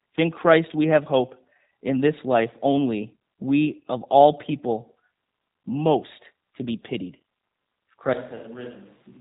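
From the start, the speech carries G.729 codec damage: nothing passes above 3.8 kHz, and the voice sounds rough and faintly synthetic, rebuilt from a filter and a few pulses per frame, which fits an 8 kbit/s coder. Unlike a plain low-pass, this also adds a buzzy graininess.

At 8.13 s, through to the end, the sound abruptly turns roomy and hollow, loses bass, and drops about 10 dB, while background noise rises to roughly 25 dB below the speech. This is likely a switch to a distant microphone, not a fade or reverb added in processing, because the change is instant and the noise rises with it.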